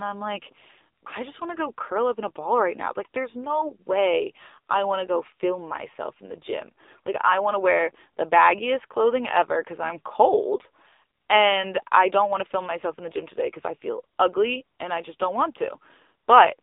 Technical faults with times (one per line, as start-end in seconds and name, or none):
0.00-16.62 AMR narrowband mobile codec